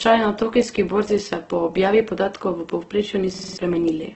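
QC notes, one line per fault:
Throughout, Opus compression: heavy grainy, rough texture with nothing above 8.2 kHz, likely from low-bitrate Opus music mode, consistent with roughly 12 kbps.
3.34–3.58 s, system hang loop: a 46 ms fragment repeats five times at 21.5 Hz, fitting a 2048-sample buffer; about a fifth of a second is lost.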